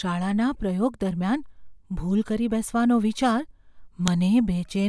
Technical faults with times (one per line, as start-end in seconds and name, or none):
4.08 file header played as audio